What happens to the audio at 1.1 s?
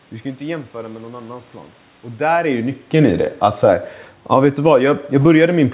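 Nothing goes wrong at 1.1 s; the speech passes through intact at that moment.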